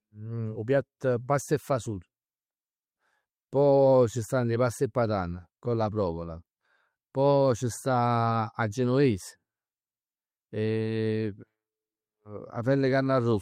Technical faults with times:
0.00-13.41 clock drift between sender and receiver
0.42-13.31 repeated timing corrections

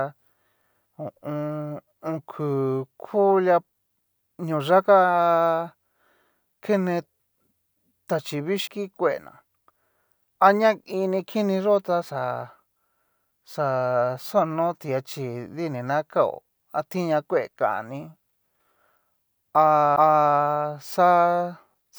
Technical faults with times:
8.67 CD skip
19.96 CD skip

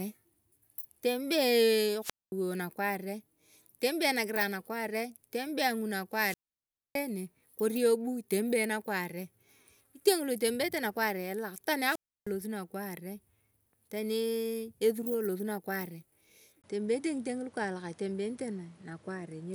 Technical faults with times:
2.01-2.32 wireless microphone squelch dropout
6.12-7.03 wireless microphone squelch dropout
11.82-12.31 wireless microphone squelch dropout
16.62-19.54 input switched to a poorer device

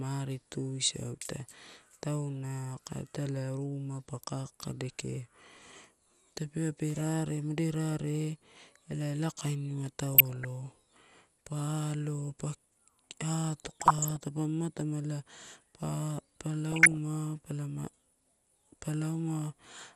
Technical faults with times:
0.00-19.95 MP2 compression
10.12-10.45 DAB burbling
13.64-14.21 DAB burbling
16.72-16.97 DAB burbling

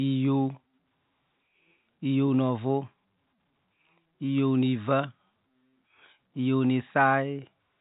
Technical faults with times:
none

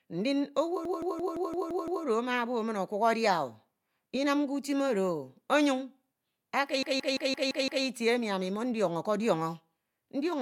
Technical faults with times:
0.85-2.05 system hang loop
6.83-7.85 system hang loop

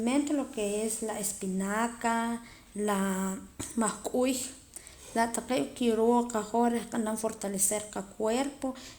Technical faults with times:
none

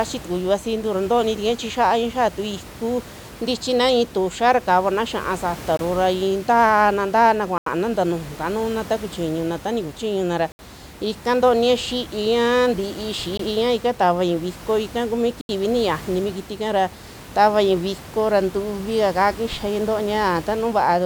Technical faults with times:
5.77 Bluetooth stall
7.58-7.67 Bluetooth stall
10.52-10.59 Bluetooth stall
13.37-13.39 Bluetooth stall
15.41-15.49 Bluetooth stall

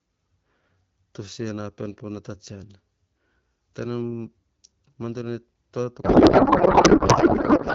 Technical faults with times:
5.48-5.64 processor overload crackle
6.03-7.75 codec payload misread

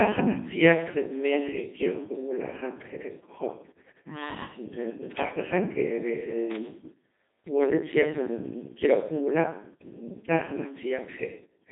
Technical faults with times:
0.00-11.72 Codec 2 vocoder

